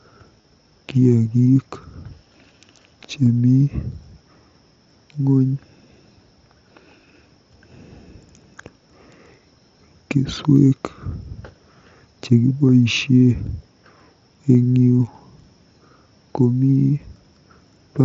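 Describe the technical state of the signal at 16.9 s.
At 16.9 s the speech is intact, with no fault at that moment, only the usual band limit of the Bluetooth mSBC headset codec it passes through.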